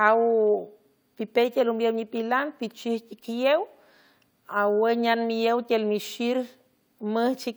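No technical faults are audible in this speech recording.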